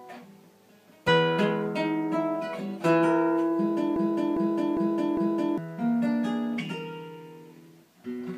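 At 1.07 s the audio has a brief glitch, the mark of damaged data in a compressed stream: a short run of corrupted bytes leaves the decoder unable to read the affected frame correctly, so it loses sync and jumps ahead to the next valid frame header. The second problem is a broken-record loop from 3.96 s to 5.58 s, where a fragment of about 0.4 s repeats exactly four times back to back before normal playback resumes. The likely cause is a stall in the player, encoder or stream that kept resending the last buffered fragment, so the audio that should have played across that stretch is missing rather than delayed.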